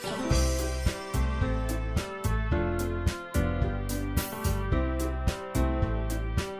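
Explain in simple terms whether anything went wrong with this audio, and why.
Nothing went wrong here: no faults can be heard anywhere in the recording.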